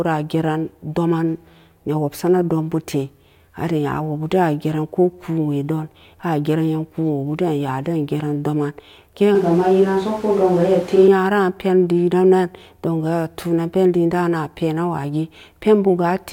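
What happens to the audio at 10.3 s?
From 9.35 to 11.08 s the speech abruptly turns hollow, roomy and thin, likely a switch to a distant microphone, with sharp transitions at both ends unlike gradual added reverb.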